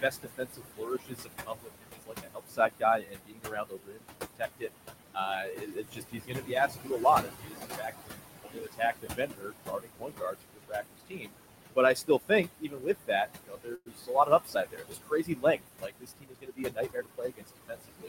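A background runs through this speech recording: room noise sitting only about 6 dB below the talker is pumped down by roughly 20 dB in the pauses and swells back beneath each phrase. These are noise suppressor artifacts from a processor that treats every frequency band it judges to be steady noise as something to remove, frame by frame. That same processor also produces speech cut by the noise suppressor. Soft sounds and word tails are swallowed, dipping by about 20 to 22 dB, across 0.01 to 4.7 s, 5.42 to 7.05 s, 7.21 to 8.18 s, 8.39 to 11.36 s, 11.94 to 13.1 s and from 13.26 s to the end, because those quieter parts of speech were mistaken for background. At 13.75 to 13.88 s the last sound hangs on as a fading buzz or hiss, drops to near silence for about 40 ms, then resumes where it left off with nothing lost. This call audio freeze likely came from delayed packets draining the jitter buffer, inserting roughly 0.11 s of extra delay. 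From 15.91 to 17.07 s the talker sounds hurried at an unchanged pitch, running about 9% fast. This is a jitter buffer speed-up, where the receiver trimmed short pitch-period slices, about a tenth of a second in all, to work off excess buffered delay.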